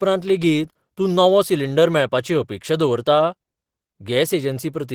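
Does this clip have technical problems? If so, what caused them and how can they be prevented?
Yes. Opus voice compression runs through the whole speech clip: the voice sounds hoarse and slightly robotic because the excitation is coded coarsely, which fits a rate near 16 kbps. Unlike plain band-limiting, the top still reaches about 20.4 kHz, so the damage is texture, not muffling. Giving the encoder a higher bitrate prevents it.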